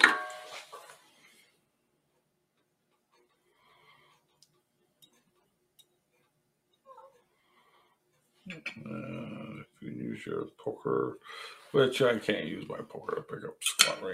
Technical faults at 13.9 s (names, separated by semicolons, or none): noise suppressor applied to music or sounds